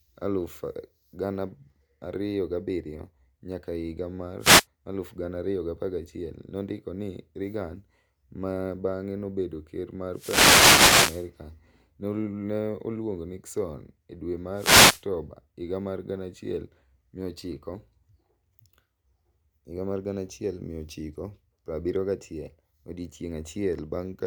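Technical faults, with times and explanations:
4.39–4.66 s, 10.12–11.29 s and 14.54–15.04 s: wireless microphone noise hit. The FM radio link fades as reflected paths cancel, so receiver noise rises into a swish of static over the speech. The longest fade runs about 1.2 s.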